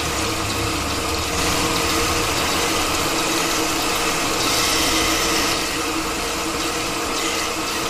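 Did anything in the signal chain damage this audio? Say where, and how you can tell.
Yes: a doubled audio track runs from 1.38 s to 5.54 s. A second, full-band copy of the sound trails the original by about 150 ms at roughly equal loudness, giving a hard slapback with no decay or room colouring. It cuts in and out abruptly at those times. That points to the same signal reaching the mix twice, likely through a slower parallel capture path or an edit that stacked two misaligned copies.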